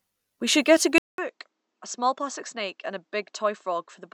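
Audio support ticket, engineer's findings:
From 0.98 s, after "also should get a": 200 ms gap, then dull sound cut off above 8 kHz, about 10 dB quieter. Likely input switched to a poorer, narrower-band device.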